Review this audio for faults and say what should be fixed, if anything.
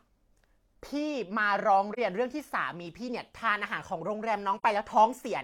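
AAC frame loss with muting at 1.93 s and 4.58 s: each dropout, about 43 ms long, fits one lost frame whose spectrum the decoder zeroed, so overlapping windows fade the speech out and in, unlike a hard digital cut. Protecting or retransmitting frames prevents this.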